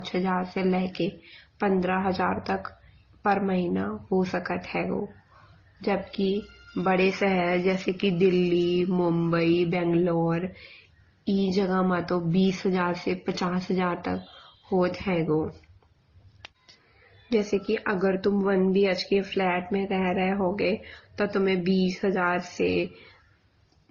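From start to finish, the speech has nothing above 6.8 kHz. The top is cleanly shaved off. Over that dull band sit mixed artefacts from different codecs, heard together. These textures don't belong to one codec. The likely cause is transcoding between lossy codecs, with low-bitrate MP3, AAC and Opus stages in series. Each stage re-encoded the earlier damage and added its own.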